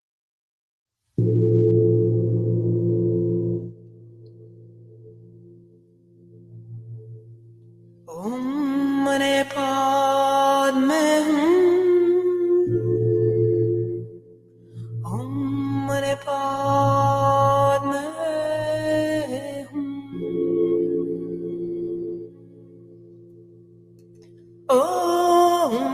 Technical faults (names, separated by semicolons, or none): noise suppressor applied to music or sounds; sound cut by the noise suppressor